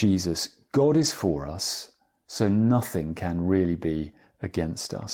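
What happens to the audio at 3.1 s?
Right after "for us so", from about 3.07 to 3.09 s, there's a lost packet rebuilt from error correction. The next packet carried a low-bitrate backup copy, which fits a single lost 20 ms packet, so there's no dropout, just a brief rougher, noisier patch before "can really be".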